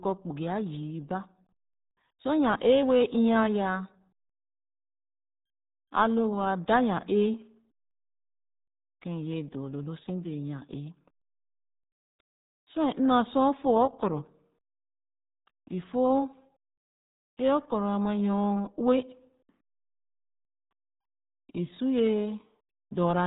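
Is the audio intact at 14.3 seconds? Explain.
No. At 14.3 seconds, as throughout the clip, the speech carries RealAudio 14.4 codec damage. Nothing passes above 3.8 kHz, and the heavy coarse coding, which fits an 8 kbit/s dial-up codec, leaves it muffled and gargly. That gargle separates it from a simple low-pass filter.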